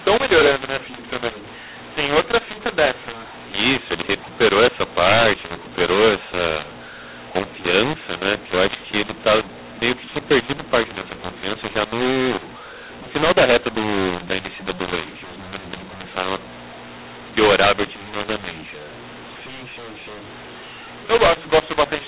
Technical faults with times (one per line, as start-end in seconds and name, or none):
0.00-22.07 mu-law and A-law mixed up